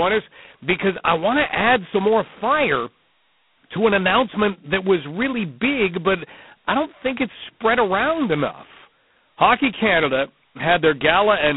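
G.726 ADPCM damage runs through the whole speech clip, and its heavy grain fits the codec's lowest 16 kbit/s mode. Each sample is coded as only two bits of difference from an adaptive prediction, so the prediction errors surface as a harsh, rasping hiss that rises and falls with the speech level. The sound is confined to a telephone band of roughly 150 Hz to 3.5 kHz, with nothing above 3.9 kHz.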